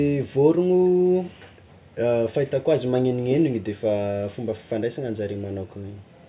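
No technical faults can be heard anywhere in the recording, and the signal holds steady throughout.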